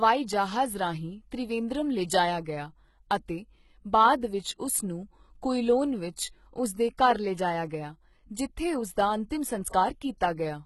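HE-AAC compression runs through the whole of this speech recording. The damage is heavy, with nothing above 11.8 kHz. What treble there is sounds synthetic rather than captured: the likely cause is an HE-AAC v2 encoder at a rate that fits about 16 kbps, coding only the lower band and rebuilding the upper range by copying lower bands upward under a coarse envelope. Harmonics therefore fail to align across that crossover, and sibilants come out gritty and metallic. Pre-echo appears at 2.44 s, between "ਜਹਾਜ਼ ਰਾਹੀਂ ਤ੍ਰਿਵੇਂਦਰਮ ਲਿਜਾਇਆ" and "ਗਿਆ ਅਤੇ", spread over 18 ms, and again from 9.69 to 9.73 s, spread over 48 ms. In both places a sharp onset sits late in a transform block, so quantisation noise sized for the loud attack also fills the quiet instant before it. The result is a brief hiss ahead of the attack and a softened, smeared onset.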